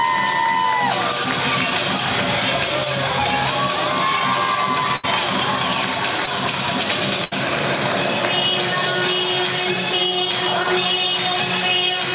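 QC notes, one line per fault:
4.96–5.05 s and 7.24–7.33 s, burst of packet loss: each time the sound turns into a held buzz or fading hiss for about 73 ms before resuming further on, with about 80 ms skipped. Consecutive packets were lost or arrived too late, so the receiver extended and faded the last sound. Both gaps sit within the narrowband call band, with nothing above 4 kHz.
6.25–6.37 s, short concealed packet loss: a brief smear or wobble, about 12 ms long, where 20 ms of audio never reached the decoder in time. The receiver continued the preceding sound and blended back, adding a small timing slip of roughly 15 ms.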